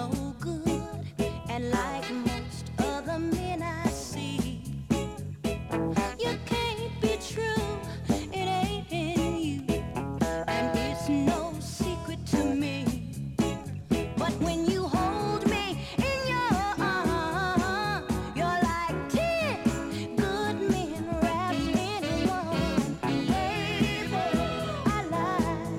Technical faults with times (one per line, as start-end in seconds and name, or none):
none